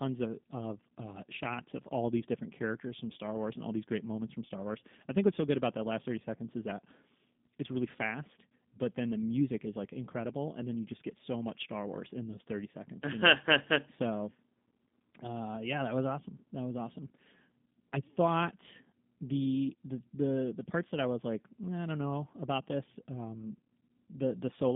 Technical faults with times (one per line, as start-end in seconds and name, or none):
0.00-24.75 G.729 codec